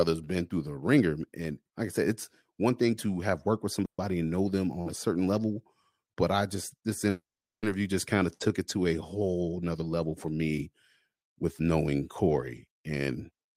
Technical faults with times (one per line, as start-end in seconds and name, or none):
3.85-4.00 call audio freeze
7.10-7.65 call audio freeze
12.27-13.55 jitter buffer speed-up